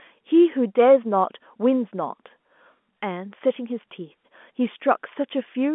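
No technical faults can be heard anywhere in this speech.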